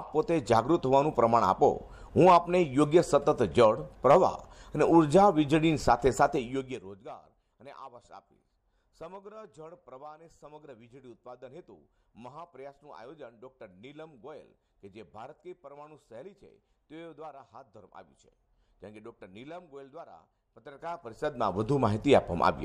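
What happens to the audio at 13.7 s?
Nothing goes wrong at 13.7 s: the audio plays through intact.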